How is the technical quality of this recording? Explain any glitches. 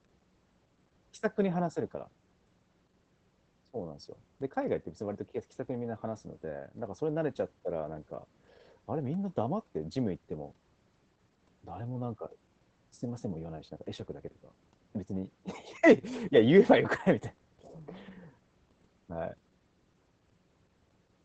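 Quality is limited by compression throughout. Opus voice compression runs the whole way. The sound points to a low bitrate, around 12 kbps, in the SILK speech mode at wideband. It sounds muffled, slightly hoarse and faintly robotic.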